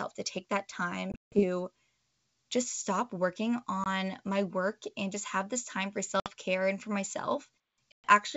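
Packet loss on an ADPCM call punches hard-edged silent holes. The first is at 1.12–1.43 s after "to take that", with about 180 ms lost. The others fall at 3.84–3.87 s before "my work and just", at 6.20–6.29 s between "have this time for" and "care and for", and at 7.92–8.07 s. Each gap throws the decoder's predictor and step size out of step with the sender. The speech then returns with brief distortion.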